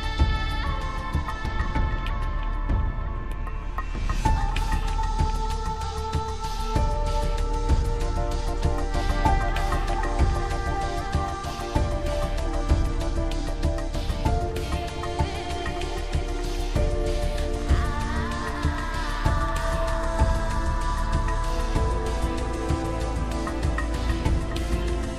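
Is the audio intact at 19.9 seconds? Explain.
Yes, the audio at 19.9 seconds is intact, with no audible fault at that moment.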